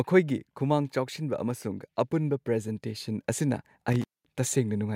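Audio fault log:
0.05 to 0.97 s, automatic gain falling: the gain control judged the input too loud and eased it down by about 4 dB, so speech and background sink together, a waveform envelope tapering steadily.
1.19 to 3.73 s, automatic gain rising: gain crept up by about 6 dB as the input seemed too quiet, lifting speech and noise floor together; the spectrogram brightens gradually across all bands.
3.92 to 4.35 s, intermittent contact: a loose connection opened for about 209 ms, dropping the sound to faint hiss with crackle at each edge; the waveform collapses abruptly between sharp spikes.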